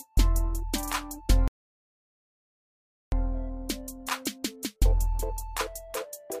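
At 1.48 s the sound halts mid-flow and the output stays completely silent until 3.12 s, a gap of about 1.64 s, which is a playback stall. The likely cause is the player running short of data, or its output thread being blocked, so nothing reached the device until it recovered. Unlike a brief dropout lasting milliseconds, this silence runs well over a second, cutting the sound abruptly rather than fading.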